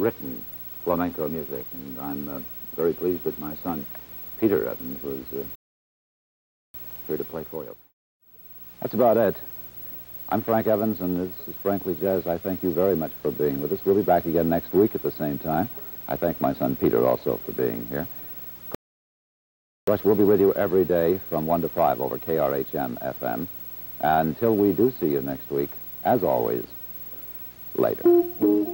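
At 5.55 s and again at 18.75 s, a rebuffering stall inserts about 1.2 s and 1.1 s of silence, a flat waveform and blank spectrogram, before playback resumes with nothing lost.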